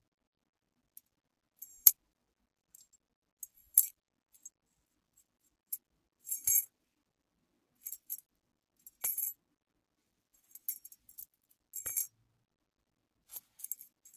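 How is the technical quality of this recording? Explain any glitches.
One fault is audible. From 3.55 to 3.72 s, the noise suppressor cut the sound, mistaking it for noise and pulling its level down by about 9 dB for roughly 150 ms, so it briefly sinks.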